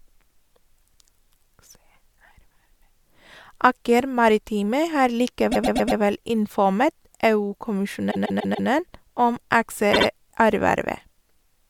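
Repeated frames: the decoder received short runs of compressed frames more than once, so the speech stutters, looping 120 ms four times at 5.51 s, 144 ms four times at 8.10 s, and 72 ms twice at 9.93 s.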